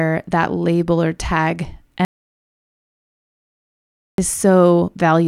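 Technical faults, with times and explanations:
2.05–4.18 s, audio dropout to silence: speech halts mid-flow into 2.13 s of total silence with no room tone, likely from lost input; flat waveform, blank spectrogram.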